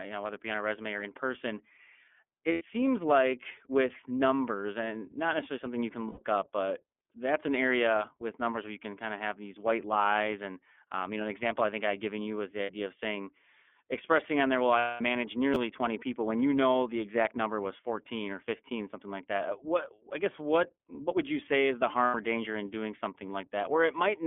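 Throughout, the sound carries plainly audible iLBC codec damage: a rough, synthetic edge from frame-by-frame excitation coding, which fits the 13.33 kbps mode with 30 ms frames. The line band runs from 250 Hz to 3.4 kHz, so a spectrogram shows an empty region above 3.4 kHz and thin energy below 250 Hz.

Lost iLBC frames appear at 2.52 to 2.62 s, 6.08 to 6.19 s, 12.63 to 12.72 s, 14.79 to 15.01 s and 22.05 to 22.15 s. At each gap the decoder repeats the last pitch cycle mixed with noise, so the gap sounds like a held, buzzy or breathy vowel. The gaps last 90, 90, 60, 210 and 90 ms, which fits runs of three, three, two, seven and three 30 ms frames. The 210 ms gap is long enough for the concealment to fade. On a spectrogram each gap shows flat, repeated harmonic stripes smeared with noise. The waveform shows a short periodic pattern repeating, roughened by the added noise. Clear sound returns almost at once after each gap because the frames decode independently.

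Chunks out of order occur at 15.54 to 15.56 s, just after the longest gap. A 10 ms chunk plays one chunk late, swapping places with its neighbour. This leaves three hard joins, heard as a brief jumbled flicker. The waveform shows discontinuities at the joins, and the spectrogram may show thin vertical lines there.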